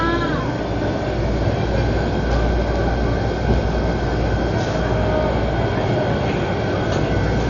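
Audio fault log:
Throughout: Dolby Digital compression. The sound is dull and closed-in, with nothing above 7 kHz, and a rough, fluttering grain clings to tonal parts instead of letting them ring cleanly. This heavy damage is likely from a low-bitrate Dolby Digital encode, which fits a rate of around 40 kbps: the encoder cut the band and left many frequency lines without mantissa bits, so the decoder filled them with dither noise that shimmers around the tones.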